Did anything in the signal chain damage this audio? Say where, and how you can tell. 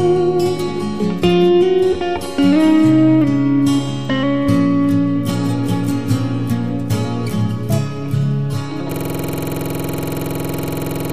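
Yes, there is a system hang loop at the driver or buffer stage. From 8.92 s to the end of the clip, one 46.44 ms slice of audio repeats exactly, about 47 times, producing a rough, rapid stutter at 21.5 Hz in place of the sound that should continue. The host or driver stopped supplying new data, and the hardware kept replaying the same ring buffer. The loop length fits a 2048-sample buffer.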